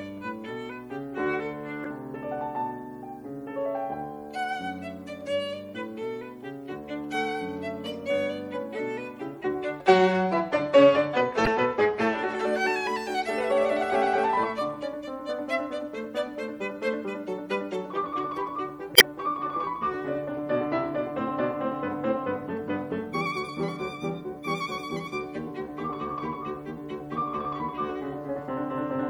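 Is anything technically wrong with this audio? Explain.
Yes. Two kinds of fault are present in this music.

MP3 compression, throughout: the treble is cut off and the upper detail swirls and turns watery, with metallic chirps on bright sounds and smeared attacks. This is likely heavy MP3 encoding, where a bitrate near 64 kbps forces the encoder to drop the top band and switch weak frequency components on and off between frames.

Damaged data in a compressed stream, at 1.84 to 1.86 s, 11.45 to 11.48 s and 18.93 to 19.02 s: corrupted bytes make the decoder misread frames and lose sync until it finds the next frame header. Each spot is a short squawk or blip, and the last is the longest at about 90 ms.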